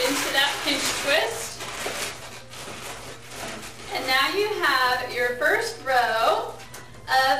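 The whole clip carries sample clock jitter: the converter's clock is wobbling, so each sample lands slightly early or late, and the timing error turns into noise that scales with how steeply the waveform is moving. Here it sounds like a fine hiss or roughness riding on the audio, worst on loud and bright passages and gone in the quiet bits. The error sits at a fairly high level, roughly 15 dB below the signal, which fits clock wander somewhere around 10 microseconds. On top of that there are two Bluetooth SBC bit pool drops, from 0.44 to 3.92 s and again from 5.58 s to the end. The treble goes dull and a gritty, grainy noise creeps in. That's what happens when a congested link forces the sender to cut its bit budget: the top sub-bands get starved and everything else is quantised coarsely. The sound fits the bit pool falling from 31 to 15, around 105 kbps, and it clears up between the two drops once the rate recovers.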